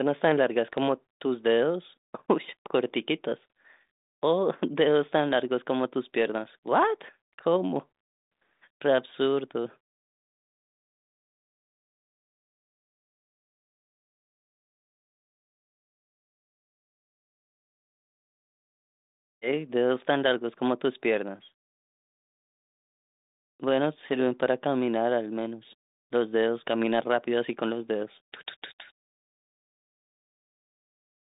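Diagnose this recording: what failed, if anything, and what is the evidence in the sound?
Nothing in the chain has failed, and the speech arrives intact. What can be heard of the working G.726 ADPCM path at 40 kbit/s is a telephone band running from about 200 Hz to 3.7 kHz, with nothing above 3.8 kHz and at most a faint coding texture under the speech.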